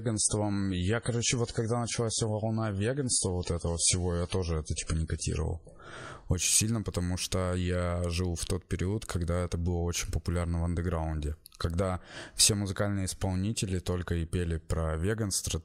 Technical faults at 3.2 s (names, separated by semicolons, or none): adaptive stream starting at a low bitrate